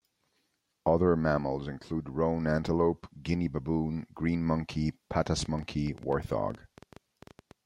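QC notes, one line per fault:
5.26–7.52 s, train of clicks: a run of around twenty sharp ticks, arriving at an uneven pace of about 8.9 per second, each with much the same shape and roughly as loud as the speech itself, so they sit plainly on top of it and carry on through any gaps. A repeated, near-identical pulse like this likely comes from electrical interference from nearby equipment or a faulty connection or power supply.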